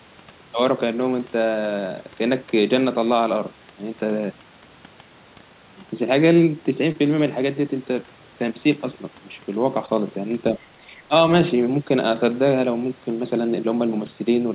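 At 6.92–6.96 s and again at 9.86–9.89 s there is a brief smear in the speech, a short concealed packet loss where the receiver bridged a gap of a few hundredths of a second by extending the preceding sound. At 10.78–10.84 s the speech dips by roughly 5 dB, and at 11.07–11.13 s it drops more deeply, by roughly 15 dB. This is likely speech suppressed in double talk, with the echo canceller turning the talker down while the far end was also active. Between those dips, at 10.97–11.01 s, a faint scrap of a second voice sits about 30 dB below the speech, likely the other side's voice leaking through from the loudspeaker past the echo canceller. All of this sits within the narrow telephone band of the G.711 call path, which has nothing above 4 kHz.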